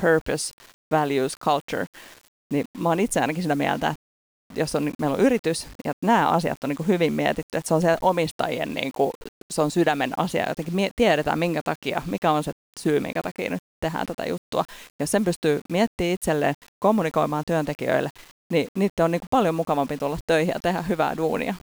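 This speech recording is stored as 8-bit audio without dither, so a grainy rounding noise some 40 to 50 dB under the loudest peaks runs through its 21.8 seconds, and the very quietest sounds turn gritty or drop out.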